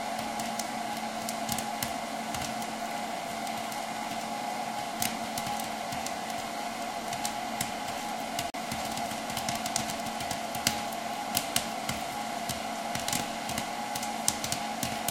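A recording of sounds cuts to about 40 ms of silence at 8.5 s, then resumes. The likely cause is a Bluetooth stall: a clean gap rather than a click or repeated fragment.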